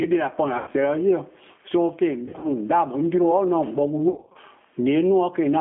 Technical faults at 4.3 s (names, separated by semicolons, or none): gain pumping; G.729 codec; VoIP packet loss concealed by the speech codec